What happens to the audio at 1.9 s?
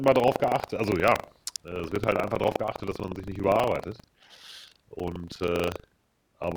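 At 1.9 s you're hearing buffer tearing, and it runs through the whole clip. Writer and hardware have slipped, so about a tenth of each 40 ms buffer replays speech from roughly 70 ms earlier, giving a robotic 25 Hz rattle riding on the voice.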